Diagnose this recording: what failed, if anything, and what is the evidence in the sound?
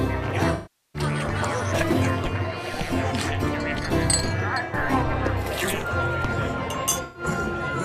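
AAC frame loss with concealment, at the codec stage. The sound smears into a noisy, phasey patch from 0.54 to 1.03 s, about 0.4 s, and again from 7.02 to 7.23 s. Lost frames were rebuilt by the decoder from the last good spectrum.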